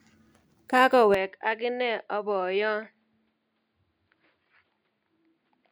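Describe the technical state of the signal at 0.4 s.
At 0.4 s the speech signal is intact, with no dropout, distortion or other technical fault audible at that moment.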